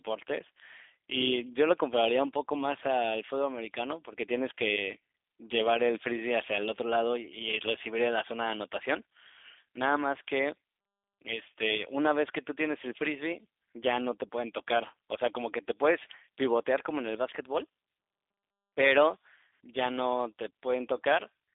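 This is a speech clip that runs through a G.729 codec the whole way, and the damage is plainly audible. The sound sits in a narrow telephone band of about 250 Hz to 3.6 kHz, with nothing above 3.7 kHz, so it's thin and boxy. Because the codec rebuilds speech from a vocal tract filter, a pitch predictor and a few pulses per frame, it comes out rough and faintly synthetic, which fits an 8 kbit/s stream.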